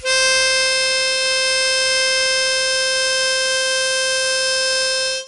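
Throughout the music, 4-bit ADPCM compression adds gritty hiss that tracks loud passages. Coarse steps cause this. Nothing sounds above 10.8 kHz, suggesting a sample rate near 22 kHz.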